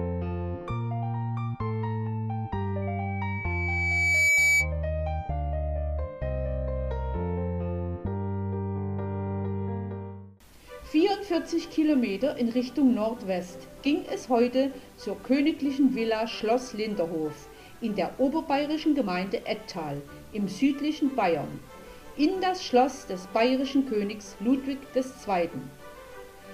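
From 2.82 to 4.73 s a loudspeaker feedback squeal appears: the microphone re-captures its own loudspeaker, and at 2.3 kHz the loop gain exceeds one. The tone swells over roughly a second and a half to around 5 dB above the surrounding sound, drawing a single brightening horizontal line on a spectrogram and a swelling envelope on the waveform.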